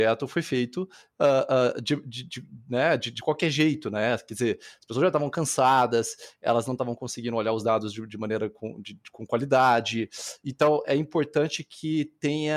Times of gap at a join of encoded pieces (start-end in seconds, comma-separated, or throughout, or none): none